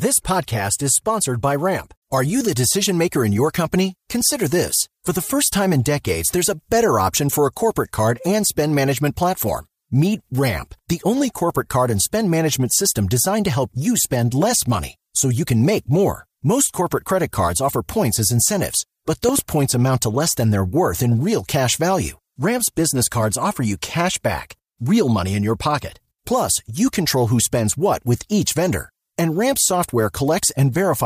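At 19.29 s, just after "points as incentives but", a loud pop cuts across the speech: two sharp, closely spaced pops spanning about 0.12 s and ending at 19.41 s, before "points amount to less". They peak at about 10 dB above the surrounding speech, which continues underneath without a break. The likely cause is a sudden voltage step, such as a connector, switch or static discharge, shaped by the downstream circuitry into a brief double pulse.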